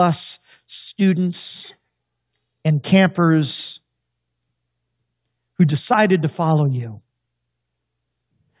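No technical faults can be heard anywhere in this speech recording.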